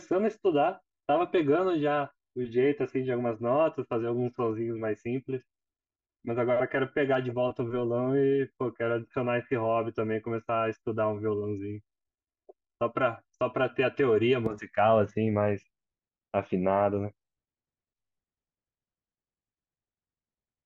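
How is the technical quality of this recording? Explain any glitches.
Quality is compromised for most of the clip by one fault. Channel delay (comb filtering), 0.00 to 14.46 s: a channel lagging about 3 ms cancels evenly spaced frequencies from around 150 Hz in mono, so speech sounds hollow and phasey.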